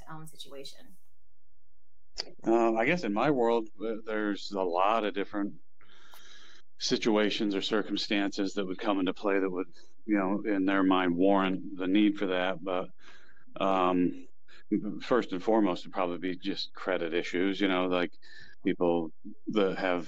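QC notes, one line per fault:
Throughout: DC offset. The whole waveform sits shifted off zero by a constant amount, about -39 dBFS. You won't hear it as such, but it eats a bit of headroom and shows up as steady energy right at the bottom of the spectrum.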